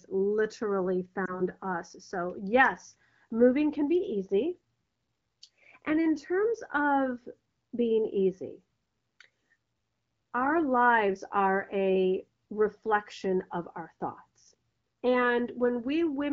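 This speech clip has a brief dip or warble in the voice between 1.25 and 1.46 s, a lost AMR speech frame, consistent with one 20 ms frame failing its checksum after radio errors. The decoder patched the gap by repeating the previous pitch and vocal tract settings at reduced gain before normal decoding resumed. The clip's AMR wideband (HD Voice) coding sounds clear, with only light codec damage, which fits a rate around 12.65 kbit/s.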